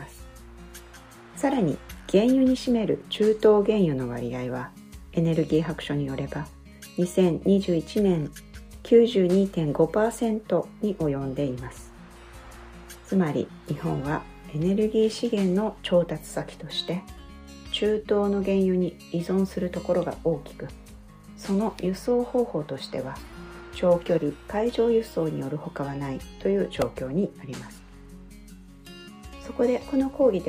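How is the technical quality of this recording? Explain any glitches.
One glitch stands out, a repeated buffer at 26.82 s. A very short piece of sound, about 1.45 ms long (which fits a 64-sample buffer), played three extra times because fresh audio arrived late. With such a tiny buffer, the hard joins fuse into a brief click or buzz rather than an audible stutter. Unlike a dropout, nothing seems to go silent or get lost.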